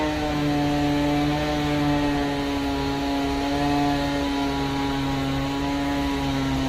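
A recording of everyday sounds whose signal shows no audible technical fault at any point.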